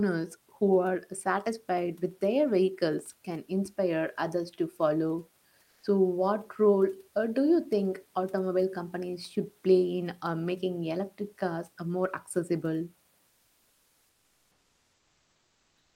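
After "inspire others to follow", from 5.63 to 5.83 s, the room background gives way to comfort noise, likely from discontinuous transmission: a flat, featureless hiss about 2 dB quieter, appearing on a spectrogram as smooth, uniform grey without texture. At 5.81 s, just before "what role uh do", the onset is clipped by the voice detector, most likely because it was late to react; the speech starts abruptly, with the waveform jumping straight to full amplitude and no gradual rise. From 13.27 s to the end, following "cars uh more accessible", the likely cause is again comfort noise replacing the background, a steady band roughly 3 dB lower.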